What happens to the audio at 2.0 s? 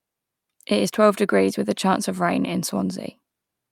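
Nothing goes wrong at 2.0 s: the speech runs on intact there, with no dropout, click, distortion or other fault at that point.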